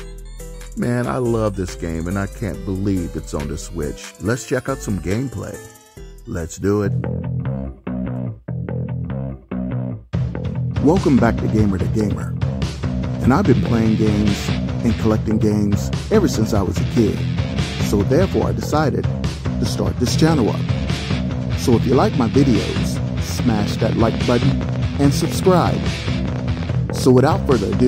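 Likely interference or a struggling interface injects a train of clicks from 23.31 to 27.83 s: about fifty uneven pops, ten per second, standing out above the sound.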